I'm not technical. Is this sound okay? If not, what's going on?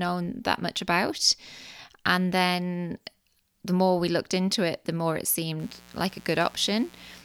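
No. From about 5.57 s, just after "it the more it", to the end at 7.24 s, there's mains buzz. Electrical interference from the 60 Hz power supply, such as a light dimmer or a poorly shielded cable, is leaking into the recording. It adds sharp spikes twice per power cycle, which pile up into a steady, raspy buzz sitting under the speech.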